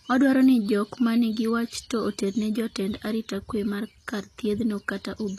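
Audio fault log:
throughout HE-AAC compression: treble likely rebuilt by spectral band replication at a low bitrate, around 24 kbps, from copied lower bands, so s sounds turn gritty and lispy, with nothing above 14.9 kHz.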